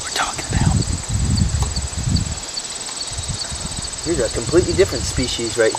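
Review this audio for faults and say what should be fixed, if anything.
Resampler restarted on every block, throughout the clip: regular ticks at 10 Hz, one every 100 ms, present only while signal is playing. Each block was converted in isolation, so the filter lacked real neighbouring samples at its edges, leaving a small error at every block boundary. To prevent it, keep the resampler's state between blocks so each block's edges are filtered against their true neighbours.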